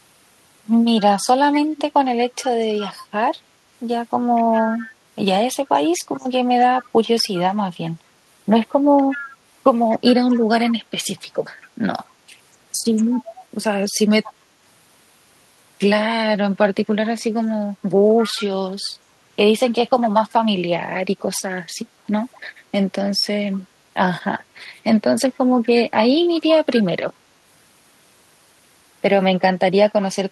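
Echo leak runs through the speech at 1.52–2.44, 4.35–4.81, 5.95–7.38, 8.97–14.33, 18.19–18.43, 22.33–22.38, 23.54–23.60 and 25.34–26.76 s. A faint copy trails the voice by 239 ms, about 15 to 35 dB down, likely from a speakerphone whose echo canceller let some through.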